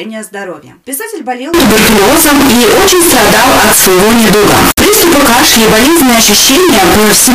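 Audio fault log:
1.54 s to 7.35 s, float read as integer: from 1.54 s to the end, the sound jumps to a harsh, near-square blast sitting at an almost fixed, high level, and quiet background noise comes up as loud as everything else. The likely cause is 32-bit float samples being read as 32-bit integers, so the sign and exponent bits set the level rather than the actual amplitude. Pitch stays followable through the distortion.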